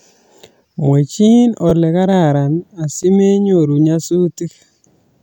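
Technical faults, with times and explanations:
1.70 to 1.72 s and 3.03 s, repeated buffer: a slice of speech about 11 ms long plays three times in a row at the first point and twice at the second, since fresh audio arrived late and the device replayed what it already held. The slice length fits a 512-sample buffer. The repeats are heard as a short stutter or click, and the speech then carries on with essentially nothing missing. On a waveform, identical short segments sit side by side with abrupt steps at each join. A spectrogram shows thin vertical broadband lines at those seams.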